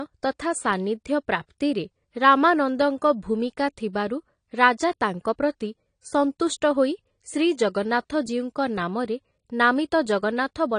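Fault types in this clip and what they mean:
AAC compression: the speech carries nothing above 10 kHz throughout, with plainly audible smearing and a warbling, fizzy texture on sustained sounds and sibilants. This is likely AAC-LC at a low rate, which fits 32 kbps. A simple low-pass filter would dull the top without that warble.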